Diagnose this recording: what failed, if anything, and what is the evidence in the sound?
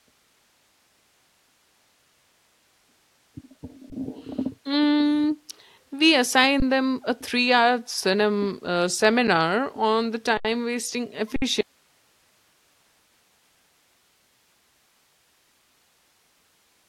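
Underrun with held sample, at the driver or buffer stage. The waveform freezes flat for 20 ms at 3.9 s, and for 20 ms at 6.6 s, just before "them a". A 7 ms hold comes at 9.27 s, just before "on the". Holds of 74 ms at 10.37 s, just after "on the", and 60 ms at 11.36 s follow. Each time the output buffer ran dry and the converter held its last value. Playback resumed where it stopped, so each ends softly.

Audio dropout to a faint residue from 11.61 s to the end. The sound cuts out abruptly, with no fade. Only hiss remains, about 40 dB below the signal. The stages after the break stayed live. The likely cause is the source being lost upstream, in the analogue wiring or input.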